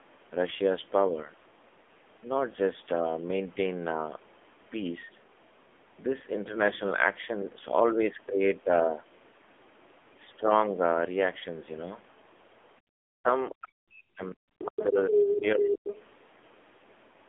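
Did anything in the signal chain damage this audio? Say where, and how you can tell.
Yes. The codec stage shows the AMR narrowband mobile codec throughout: nothing above 3.6 kHz, a 250 Hz to 3.5 kHz line band, and heavy buzzy, synthetic coding damage that fits the 6.7 kbps mode.

In call processing, the other side's voice leaks through at 13.49–13.55, 14.58–14.86, 15.12–15.46 and 15.7–15.96 s. It rises from well below the talker to roughly equal level, likely residual loudspeaker echo the canceller missed.

Also in call processing, speech is suppressed in double talk at 13.59–14.45 s and 14.67–15.9 s, dipping by about 40 dB and about 30 dB. This is likely the echo canceller attenuating everything while both sides overlapped.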